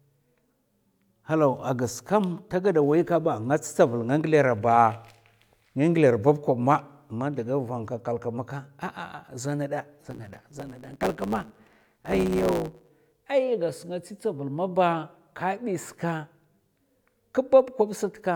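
From 10.0 s to 12.89 s the speech has a block size mismatch (truncated). One stage writes longer blocks than the next reads, so the tail of each block is discarded. This produces a 109 Hz buzz, and the speech runs 1.09 times fast at near-normal pitch.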